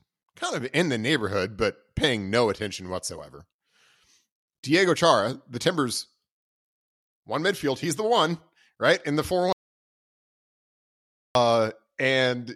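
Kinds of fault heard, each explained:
Audio dropout to silence: the speech cuts off abruptly at 9.53 s and does not return until 11.35 s, leaving about 1.8 s of silence with no room tone or background hiss at all, then resuming mid-flow as if nothing had happened. Whatever was said in that stretch is simply gone. The likely cause is a momentary loss of the input signal, such as a dropped connection or mute, while recording carried on writing zeros.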